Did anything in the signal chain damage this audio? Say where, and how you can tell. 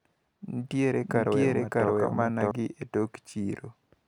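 Yes. The speech was likely captured a second time through a slower route, such as a duplicated driver or buffer path, or an edit that left two copies overlapping, producing a doubled audio track from 1.03 to 2.51 s. A full-band copy trails the original by roughly seven tenths of a second at about the same level. It has no decay or room colour, unlike an echo, and it begins and ends abruptly at those times.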